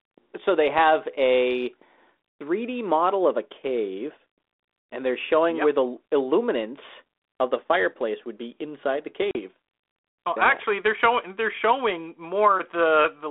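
At 9.31 s, after "would be inside the", packet loss on an ADPCM call leaves a hard-edged 40 ms silence, a few packets' worth, ending at 9.38 s. It shows as a flat gap in the waveform and a sharp-sided blank column on the spectrogram. The decoder's adaptive predictor and step size lose step with the sender's, so speech re-enters unsteadily before settling.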